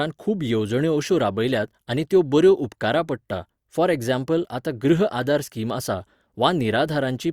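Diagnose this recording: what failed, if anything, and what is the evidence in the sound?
Nothing failed; no stage leaves any audible trace.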